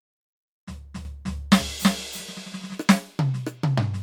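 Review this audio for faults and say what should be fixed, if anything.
A doubled audio track runs from 1.05 to 2.75 s. A second full-band copy of the music trails by around 300 ms, about 5 dB quieter, with no decay or room colour, starting and stopping abruptly. It is likely a second capture through a slower path mixed in. To prevent it, record through a single path and mute any loopback or monitor return feeding the mix.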